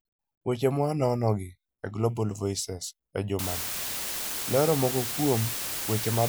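Speech, with a low bit depth with dither fault from 3.39 s to the end. The audio is quantised to 4 bits, and the dither turns the rounding error into a steady, even hiss nearly as loud as the speech, with no distortion.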